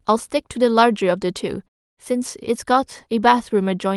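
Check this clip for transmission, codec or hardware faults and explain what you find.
Listening through this speech clip, nothing stood out as a transmission, codec or hardware problem.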